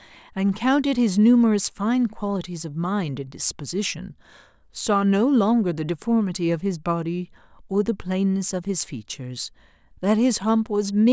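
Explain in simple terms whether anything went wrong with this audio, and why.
Nothing went wrong here; this speech recording comes through with no technical problem that a listener would notice anywhere in it.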